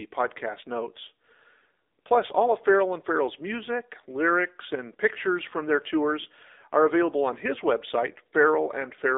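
Throughout the speech, the AMR narrowband mobile codec limits the sound to a band from 300 Hz to 3.7 kHz. It rebuilds the voice from a vocal-tract model driven by sparse pulses. The result sounds plainly buzzy and synthetic, which fits a low 7.4 kbps mode.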